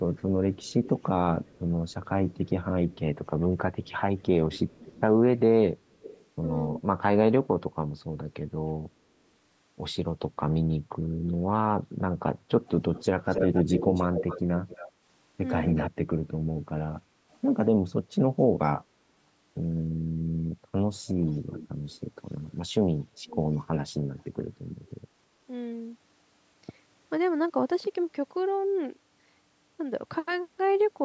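A faint, delayed copy of the speech trails the talker from 0.16 to 6.26 s, about 276 ms behind and roughly 20 dB down. This is echo leak, most likely from a far end on loudspeaker whose echo canceller let part of the playback back into its microphone. It returns much louder, close to the speech level, at 12.67 to 15.91 s with a 266 ms lag. A barely audible scrap follows at 17.32 s. The echo comes back around 20 dB down at 21.07 to 21.98 s, now lagging by 296 ms, and once more, very faintly, at 24.19 to 24.91 s.

Between those last two, at 23.15 to 23.34 s, the talker's voice briefly drops out, sinking by something like 30 dB for about a fifth of a second. This is speech suppressed in double talk: with both sides active, the echo canceller likely mistook the near talker for echo and pulled it down. Throughout, the sound carries nothing above 8 kHz, in keeping with ordinary call microphone processing.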